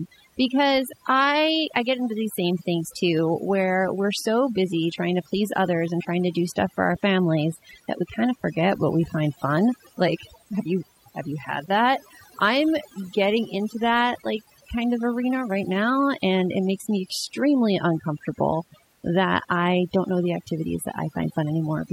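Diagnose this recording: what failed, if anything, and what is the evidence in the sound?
Overdone noise removal at the call-processing stage runs throughout. Between phrases the background collapses to near silence sprinkled with twinkling specks. A spectrogram would show blackened gaps dotted with isolated bins, and ragged, fragmented speech harmonics.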